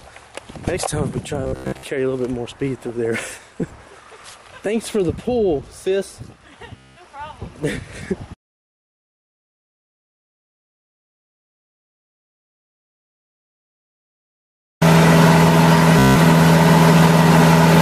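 Bluetooth stutter hits at 1.44–1.87 s, 6.77–7.03 s and 15.99–16.17 s. Late packets make the receiver replay short slices, producing a machine-gun buzz before the sound jumps ahead. Spectrograms show evenly repeating vertical stripes, and the waveform shows identical copied blocks.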